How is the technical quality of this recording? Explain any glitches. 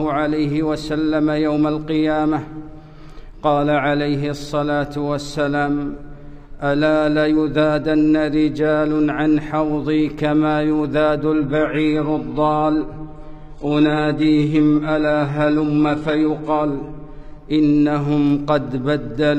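One glitch stands out. Adaptive stream at a lower bitrate, 11.39 to 17.39 s: a slowed connection forces a low-bitrate fallback, so treble vanishes above 11.5 kHz, switching abruptly without gaps.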